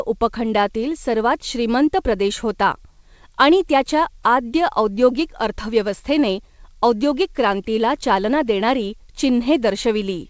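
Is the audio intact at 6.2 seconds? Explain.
Yes, at 6.2 seconds the speech comes through intact, with only the band-limited sound of the call codec path and no fault at that moment.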